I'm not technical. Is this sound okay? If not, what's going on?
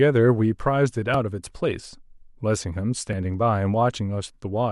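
No. The recording was likely handled in pieces about 2 seconds long, and a tiny sliver of audio, roughly a hundredth of a second, went missing at each handover. This is called audio missing between chunks. The speech jumps forward slightly at 1.14 seconds and again at 3.13 seconds, about two seconds apart. No silence fills the gap; the sound on either side is simply butted together, so each spot comes across as a brief skip.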